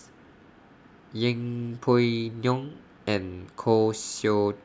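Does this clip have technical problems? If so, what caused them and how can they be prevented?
No, this clip has no technical problems, so there is nothing to prevent.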